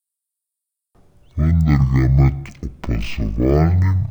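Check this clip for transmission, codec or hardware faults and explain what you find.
One fault is present, and it affects the whole speech clip: stereo read as mono. From start to finish the speech plays at half speed and a full octave low, a 12-semitone drop. The left and right samples of a stereo stream, stored alternately, have been taken in sequence as one channel, so each real instant occupies two sample slots. Playback therefore runs at 0.5 speed, giving slow, deep, dragging speech, with a fainter mirrored copy of the sound folded into the upper half of the spectrum.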